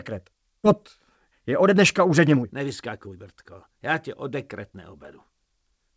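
Audio carried over a call path whose spectrogram stops cleanly at 8 kHz, which fits wideband G.722, has a skip ahead at 0.64–0.66 s. Roughly a second of material vanishes and the two sides are butted together with no fill, showing on the waveform as an abrupt splice where the envelope changes without any gap. This is likely the jitter buffer discarding a backlog to catch up. From 1.30 to 3.74 s a jitter buffer speed-up plays the audio at 117% by repeatedly cutting out pitch-period-sized pieces, about 0.4 s in all. It sounds hurried at unchanged pitch, and the spectrogram's harmonics stay level while events crowd closer together. A milder speed-up at 104% from 4.70 to 5.94 s removes only a few tens of milliseconds and slightly compresses the timing.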